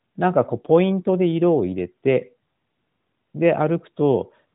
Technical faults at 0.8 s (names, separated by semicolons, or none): none